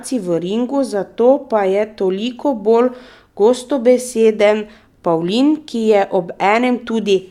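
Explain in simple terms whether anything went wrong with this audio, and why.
Nothing went wrong that I could hear: listening through this speech recording, no problem stood out at any point.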